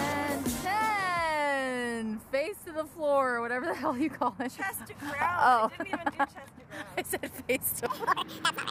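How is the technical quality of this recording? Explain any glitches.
The recording has one clear glitch, a section at the wrong speed in the final stretch. From 7.86 s to 8.70 s, the end of the clip, the audio runs 1.81 times too fast, so pitch jumps by nearly ten semitones and everything sounds high and hurried. The likely cause is that this segment was played or edited against the wrong clock rate. On a spectrogram, the harmonics there sit visibly higher and more widely spaced, and events are squeezed closer together. The waveform shows correspondingly compressed, denser cycles.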